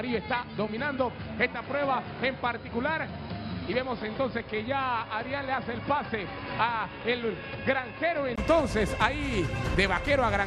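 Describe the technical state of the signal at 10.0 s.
At 10.0 s the signal is intact, with no audible technical fault at that moment.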